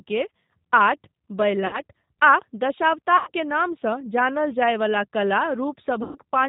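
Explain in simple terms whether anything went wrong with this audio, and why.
Two things went wrong. The whole clip went through the G.729 codec, a phone-call compressor that rebuilds speech from a rough model of the voice and drops everything above 4 kHz, so the speech sounds a bit muffled, rough and synthetic throughout.

There was also VoIP packet loss concealed by the speech codec at 1.67–1.81 s, 3.17–3.31 s and 6.03–6.18 s, with about 60, 100 and 120 ms of audio missing. The decoder patched each gap by stretching the last sound into a fading buzz or noise, and the speech stays weak briefly afterward.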